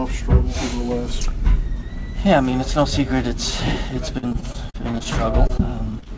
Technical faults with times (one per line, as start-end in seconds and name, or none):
4.18-5.61 repeated packet loss (robotic sound)
5.99-6.08 short concealed packet loss